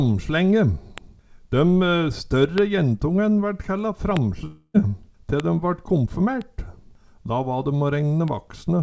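Single bits flipped in one to three consecutive samples at 0.98, 2.58 and 4.17 s, and again at 5.40, 6.42 and 8.28 s. Each bit error spike forces a sample to a wildly wrong value for an instant, so each is a sharp, broadband tick that has nothing to do with the surrounding sound. Between 4.46 and 4.76 s the signal stops in a way that points to a long network dropout, likely a stretch of packets that never arrived. For about 0.28 s the receiver keeps extending the last sound into a fading buzz, then there is a brief gap of about 20 ms of silence, and the audio resumes with roughly 0.28 s of material simply missing. Throughout, nothing is heard above 8 kHz, which fits a 64 kbps G.722 call path.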